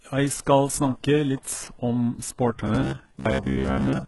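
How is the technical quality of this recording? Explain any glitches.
Technical quality is poor: heavy codec damage runs through the whole clip, and the last stretch turns robotic.

The entire clip shows heavy coding damage, with nothing above 11.5 kHz. That's likely HE-AAC compression at a very low bitrate, around 12 kbps: only the lower spectrum is actually coded, and the treble is rebuilt from copied lower bands, so the highs don't truly match the speech.

From 2.67 s to the end of the clip, there's robotic sound from repeated short buffers, a rigid metallic buzz at 66.8 Hz. The likely cause is that fresh audio stopped arriving on time, so tiny chunks of about 15 ms were replayed over and over. Most of that stretch is repeats, so the speech only loosely comes through.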